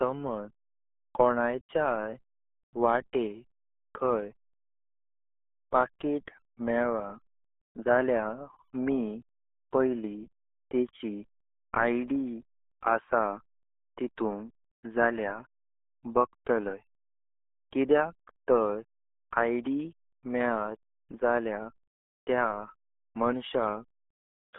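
Throughout, the speech has been squeezed through the RealAudio 14.4 codec at what sounds like about 8 kbit/s. Nothing survives above 3.8 kHz, leaving it muffled and gargly.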